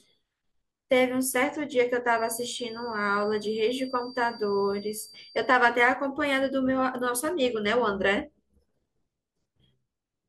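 From 2.06 to 5.61 s a thin, steady whistle near 4.7 kHz sits well below the speech, about 25 dB down, swelling and fading slowly in level. This feedback whistle is likely a loudspeaker-to-microphone loop held just at the edge of feedback, sustaining one tone without building.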